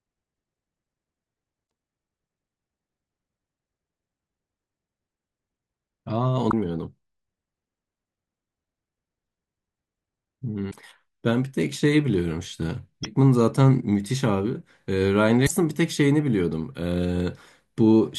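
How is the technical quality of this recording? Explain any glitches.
The recording has five short glitches from damaged data in a compressed stream, at 1.63–1.66 s, 6.47–6.53 s, 10.67–10.74 s, 13.00–13.05 s and 15.43–15.51 s, each lasting about 25 to 85 ms. Corrupted bytes leave the decoder unable to read those frames properly, so it loses sync and hunts for the next valid frame header. The result is a brief chirp, squawk, click or short hole cutting into the speech.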